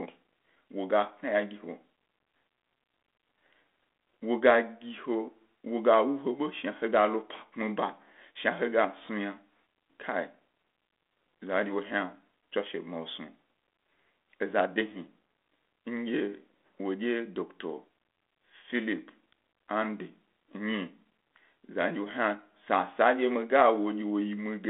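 Nothing here counts as a fault: the speech just carries the usual character of a telephone line band from 250 Hz to 3.5 kHz, coded with G.726 ADPCM at 32 kbit/s, which leaves only a light trace of its coding on the sound.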